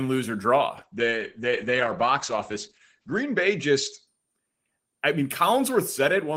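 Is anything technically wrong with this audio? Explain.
Yes, there is a call bitrate drop from 0.78 s to 4.13 s. The encoder falls from 32 to 10 kbps, holding the lowest rate for about 2.4 s, and audio bandwidth shrinks from 20 kHz to 8 kHz. The speech turns muffled and coarse, unlike a fixed low-pass filter, because graininess comes and goes with the rate.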